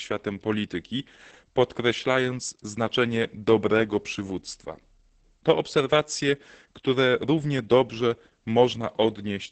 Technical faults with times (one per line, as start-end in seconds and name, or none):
0.00-9.51 Opus voice compression